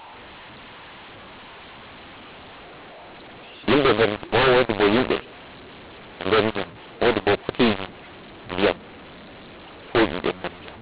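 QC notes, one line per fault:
throughout, mu-law and A-law mixed up: harsh, distorted speech with noise filling the pauses; A-law telephone samples were decoded as mu-law, scrambling every level.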